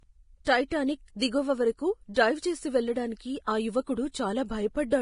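Heavy lossy encoding, likely Vorbis at a low rate of around 30 kbps, has stripped this speech recording of everything above 10.5 kHz and turned the remaining treble hissy, grainy and rough. The same transform coding causes pre-echo: quantisation noise spread across each block leaks ahead of sharp attacks, so a brief hiss precedes them and softens their onset, from 0.45 to 0.47 s (about 21 ms) and from 3.45 to 3.48 s (about 29 ms).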